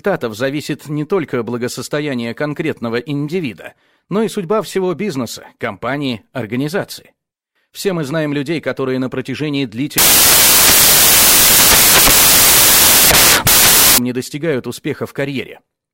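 From 9.98 to 13.98 s the reader assembles samples from the wrong bytes, misaligned or swapped, so the rapidly varying low bits land in the high positions. The sound becomes four seconds of loud, harsh broadband noise.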